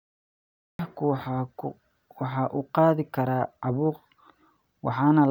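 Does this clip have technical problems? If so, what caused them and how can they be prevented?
Yes, a cut-off start: digital silence runs to 0.79 s, then speech enters mid-sound with no attack, because capture began late. A dropout would be a gap inside continuous audio. Starting the recording before anyone speaks, or using a pre-roll buffer, prevents it.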